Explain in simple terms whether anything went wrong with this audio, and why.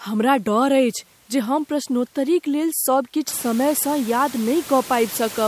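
Nothing went wrong with the system; the background room noise that gets louder from around three and a half seconds is just the noise of the space the microphone was in, and it still sits well under the speech.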